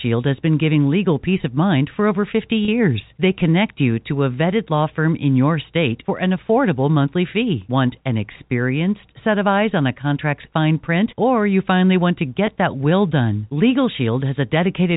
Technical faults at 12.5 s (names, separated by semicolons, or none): packet loss with pitch repetition